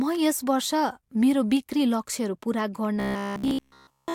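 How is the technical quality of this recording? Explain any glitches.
The recording has one fault. From 3.00 to 4.14 s the speech becomes robotic sound from repeated short buffers: a rigid, metallic 66.8 Hz buzz, likely from roughly 15 ms chunks being replayed throughout.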